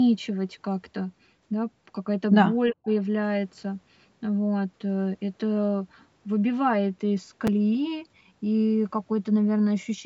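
From 2.72 to 2.89 s, the echo canceller likely could not tell the talker from loudspeaker echo while both sides spoke at once, so it turned the talker down: speech suppressed in double talk. The speech dips by as much as about 30 dB, with roughly a tenth of a second affected.

At 7.47 s, new audio arrived late and the device replayed its last block once, a repeated buffer. The replayed piece lasts 5.8 ms, which fits a 256-sample buffer, so the hard join sounds as a click or brief buzz rather than a stutter.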